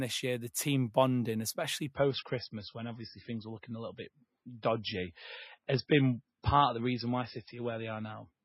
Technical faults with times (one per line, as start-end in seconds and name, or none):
1.94-8.45 adaptive stream at a lower bitrate